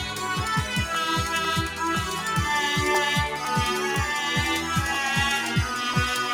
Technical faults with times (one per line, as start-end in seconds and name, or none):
0.00-6.34 noise suppressor applied to music or sounds
0.45-5.94 periodic USB or driver dropouts